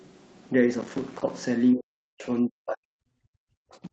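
A speech recording with two problems. From 0.81 to 1.30 s there's processor overload crackle: the audio keeps breaking into tiny silent gaps with hard edges, around thirty of them, which fits a machine missing its deadlines on 5 ms buffers over and over until the load eases. Then from 1.73 s to the end at about 3.9 s, the talker keeps dipping and chopping out, sometimes by about 40 dB. That's most likely speech suppressed in double talk, with the echo canceller ducking this side while the far end was talking too. Nothing comes through above 8 kHz, consistent with an Opus call path at that bandwidth.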